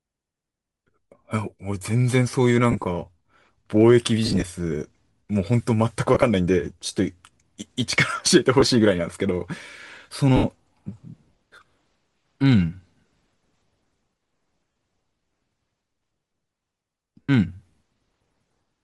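From start to finish the speech has a breathy, grainy upper band where high frequencies have been thinned and replaced by noise, plainly audible and consistent with Bluetooth LC3 compression. It likely comes from LC3 with 10 ms frames, and the texture fits a bitrate near 48 kbps.

Also present throughout is a block size mismatch (truncated). The tail of each block is discarded, producing a steady buzz at 100 Hz, the block rate. Playback speed and pitch are essentially unchanged because the discarded portion is very small.

Lost LE Audio frames occur at 0.90 s, 2.72–2.84 s, 4.26–4.42 s, 6.14–6.23 s, 8.60–8.63 s, 10.36–10.45 s, 14.73 s and 17.22–17.29 s. The decoder repeats the last spectrum with randomised phase, so each gap of 10 to 80 ms becomes a brief noisy smear instead of clean sound.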